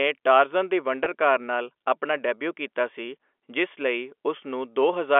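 At 1.04 to 1.06 s, a packet loss with pitch repetition breaks the speech. About 20 ms of audio goes missing, which fits a single lost packet. The receiver fills the hole by repeating the last pitch period. It sounds like a brief, slightly buzzy hold over the narrowband telephone sound.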